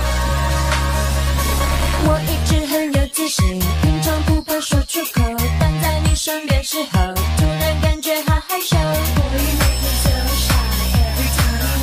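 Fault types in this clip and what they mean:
Feedback whistle: a thin, steady tone at 5.3 kHz enters at 9.47 s and continues to the end of the clip at 11.83 s, sitting roughly 15 dB below the main sound and swelling and fading slowly in level. The likely cause is an acoustic loop from loudspeaker to microphone held just at the edge of instability, so this single frequency keeps ringing without building into a full howl.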